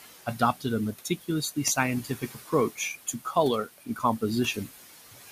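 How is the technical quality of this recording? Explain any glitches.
The recording has two processing faults, both from a noise suppressor working on room noise that sits about 13 dB below the speech.

Noise suppressor artifacts run through the whole clip. The suppressor pulls down bands it judges to be steady noise by about 15 dB, frame by frame. The background therefore drops away in pauses and swells back under speech.

Speech cut by the noise suppressor occurs at 0.26–0.65, 1.05–1.77, 2.04–2.53, 3.07–3.36 and 3.66–4.03 s. The suppressor mistook low-level parts of the speech for noise and attenuated them by about 14, 15, 15, 10 and 18 dB respectively. Only fragments within each span are affected, from about a tenth of a second to a few tenths. Those softer sounds come across swallowed or faint.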